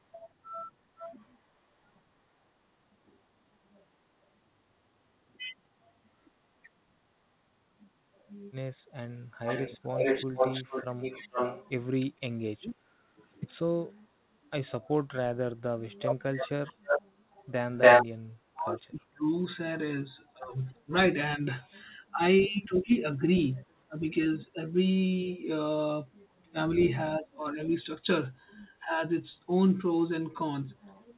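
From 9.46 to 13.24 s there is an echo leak: a second copy of the speech trails the original by 448 ms at about the same loudness. The likely cause is a far-end loudspeaker echo that the echo canceller failed to remove. On a spectrogram, each syllable's harmonic pattern repeats almost half a second later. In the waveform, the envelope shows doubled bursts.

Inside that stretch, from 12.19 to 12.8 s, the speech is turned down by roughly 35 dB. This is speech suppressed in double talk, likely because the canceller could not tell the talker from the echo while both were active. It shows as a near-empty notch in the waveform and a dark gap on the spectrogram.

From 15.84 to 24.27 s, the same suppression cuts in and out in pieces, about 3 s in total, again dropping as much as roughly 35 dB. During that span, echo leaks twice with a 288 ms delay. From 16.35 to 18.06 s the echo is about 10 dB louder than the speech, so the delayed copy dominates the waveform. 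From 22.41 to 23.64 s it is about 15 dB quieter, a faint shadow repeat on the spectrogram.

From 26.44 to 29.48 s, suppression returns in fragments totalling about 1 s, with dips of around 25 dB. All of this sits inside the G.711 band, with nothing above 4 kHz.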